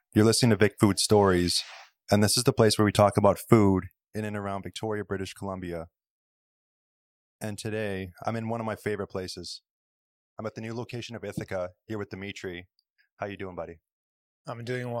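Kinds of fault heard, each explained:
Nothing here to flag, since this speech clip doesn't show any of the technical problems a listener would pick out.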